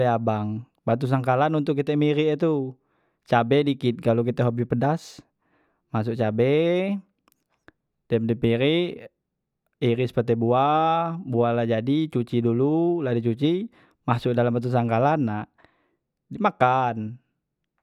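No technical faults can be heard anywhere in the recording; the signal holds steady throughout without any audible disruption.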